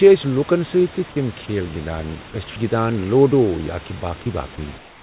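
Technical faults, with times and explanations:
4.78–5.02 s, comfort noise in place of the background: the final quarter second of room background turns into a steady, featureless hiss about 4 dB quieter, likely because the sender's voice detector paused transmission and the receiver filled the gap with synthetic noise.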